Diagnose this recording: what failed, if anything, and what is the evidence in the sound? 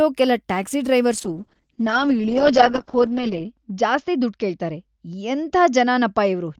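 A call bitrate drop at the codec stage, driven by the call's bandwidth estimate, begins at 1.18 s and lasts to the end. The speech turns rough and watery, and the top end goes dull. A spectrogram shows the content above 8 kHz vanishing after 1.18 s, with a hard shelf replacing the 20 kHz band, and the remaining harmonics look blurred and blocky. The sound points to an encoder cut from about 48 kbps to about 8 kbps, with the lowest rate held for roughly 2.3 s.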